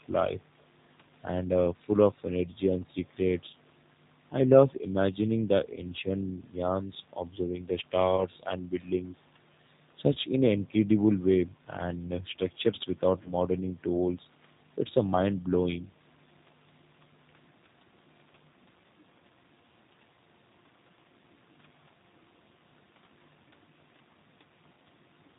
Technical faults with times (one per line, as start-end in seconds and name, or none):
0.00-25.39 G.729 codec
8.16-8.25 VoIP packet loss concealed by the speech codec
13.23-13.30 VoIP packet loss concealed by the speech codec